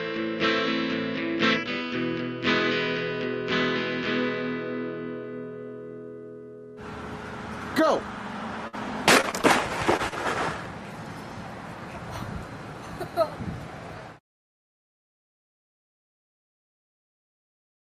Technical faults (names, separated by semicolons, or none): burst of packet loss; short concealed packet loss